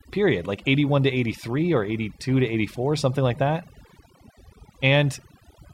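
From start to finish the speech carries overdone noise removal: a noise reducer set far too hard has pulled individual frequency bands down to nothing wherever they came close to its noise estimate, taking softer parts of the voice with them. The gaps fall to near silence sprinkled with twinkling specks. Unlike a noise gate, which mutes everything at once, this removes separate bands independently, leaving those scattered flickers.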